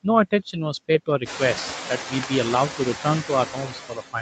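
Noise suppressor artifacts run through the whole clip. The suppressor judges which bands hold steady noise and pulls them down frame by frame, here by about 6 dB. The background therefore dips in the pauses and swells back under the speech. On a spectrogram the noise floor looks patchy rather than even, with blotchy low-level speckles between the syllables. This is most noticeable once the room noise climbs by about 19 dB at roughly 1.5 s and settles about 10 dB below the speech.

Speech cut by the noise suppressor then occurs twice. From 1.89 to 2.31 s the suppressor mistakes parts of the speech for noise. It turns them down by as much as about 16 dB across roughly 150 ms in total, so those sounds come out swallowed and faint. From 3.47 s to the end of the clip the same thing happens more severely, with drops of up to about 22 dB. In the waveform both stretches show the envelope suddenly sagging. 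The spectrogram shows the speech energy fading into the darkened background instead of standing clear of it.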